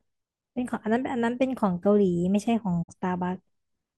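At 2.47 s the speech has a block of digital silence: a gap of about 3.75 ms where the sound dropped out. The abrupt cut out and back in, with no fade, is heard as a tick or dip.

From 2.82 s to 2.94 s there is a digital broadcast dropout. The receiver muted after bad or missing data, fading down over about 20 ms. Roughly 43 ms of programme is missing, which fits one lost frame, and is heard as a brief hole before the speech resumes.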